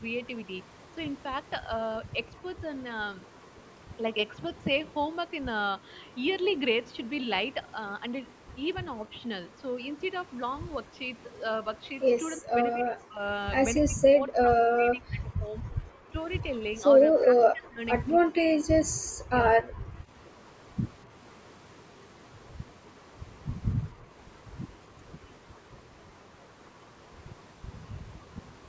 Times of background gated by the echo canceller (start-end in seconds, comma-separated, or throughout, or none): 23.93-24.11